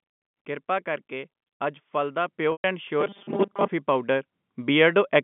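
At 2.28 s the call software judged the microphone too quiet and raised the device's input volume in one step, a microphone volume step-up of about 5 dB. Because the gain changed at the source, the speech and the background noise jump louder together, with no fade. The same thing happens again at 4.32 s, this time by about 3 dB, giving a second, smaller lift in the overall level.

From 2.52 to 2.64 s there is packet loss with pitch repetition. About 120 ms of audio failed to arrive, which fits a run of six 20 ms packets, and the receiver concealed the gap by repeating the last pitch period of the speech. That repetition sounds like a held, buzzy tone that fades away rather than carrying on naturally, before the real speech resumes with a brief cross-fade.

From 3.01 to 3.69 s the speech turns into a rigid, metallic buzz pitched at 200 Hz. This is robotic sound from repeated short buffers: new audio was likely reaching the playback stage too seldom, so the software filled the time by replaying its last short block while most of the real audio was skipped. 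A 200 Hz buzz points to a block about 5 ms long. The likely cause is a buffer starved by late delivery. Throughout, the narrow G.711 telephone band of roughly 150 Hz to 3.5 kHz is audible.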